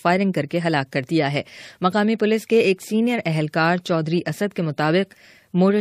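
No technical faults can be heard anywhere in the clip.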